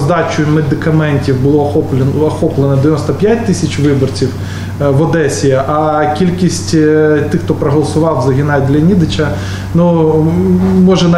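Nothing here stands out as a technical problem; the audio just runs along without any glitch or hiccup worth pointing to.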